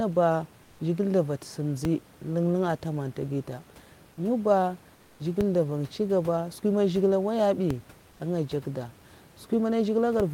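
Comfort noise in place of the background appears at 0.63 to 0.79 s, 4.95 to 5.19 s and 8.11 to 8.19 s, likely from Opus discontinuous transmission. In each gap the real room noise gives way to a steady, featureless hiss about 2 dB quieter. DC steps at 1.85, 5.41, 7.71 and 10.20 s are sudden shifts in the waveform's zero line that then decay, as a 5 Hz high-pass pulls the offset back, and each is heard as a low thump.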